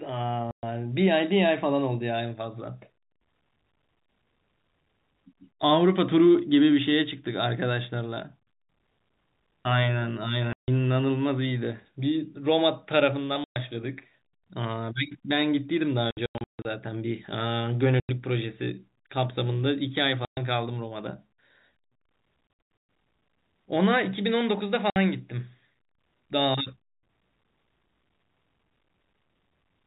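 Packet loss filled with silence leaves hard-edged holes at 0.51, 10.53, 13.44, 16.11 to 16.65 (scattered), 18.0, 20.25, 22.47 to 22.89 (scattered) and 24.9 s. The gaps run 60 to 150 ms in steps that fit 30 ms packets.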